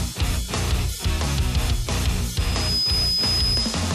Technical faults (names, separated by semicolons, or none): loudspeaker feedback squeal